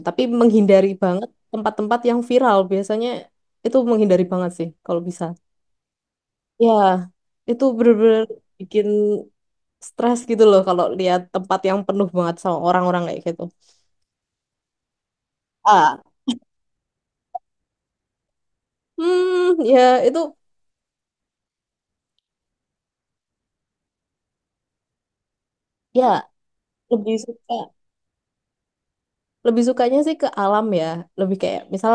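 No technical faults can be heard anywhere in the recording, and the signal stays intact throughout.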